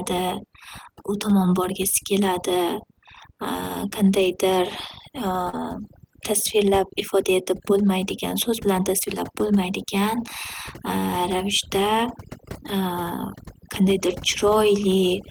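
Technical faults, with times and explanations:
Throughout: overdone noise removal. The noise reduction was set far too aggressively, cutting individual frequency bands whenever they came close to its noise estimate, and quiet parts of the speech went with them. The background drops and breaks up into twinkling specks.
4.19–4.33 s, 5.53–5.64 s and 14.06–14.12 s: lost packet rebuilt from error correction. Packets went missing, and the decoder played the low-bitrate backup copies carried in the following packets, so there is no gap. The 80 ms, 60 ms and 40 ms of rebuilt audio sound rougher and noisier. Those lengths fit four, three and two 20 ms packets.
5.49–5.61 s: short concealed packet loss. About 40 ms of audio arrived too late to be decoded. The receiver filled 35 ms by extending the preceding sound and then blended back into the real signal, which added roughly 10 ms. The result is a brief smear or wobble, and it runs straight into the rebuilt stretch that follows.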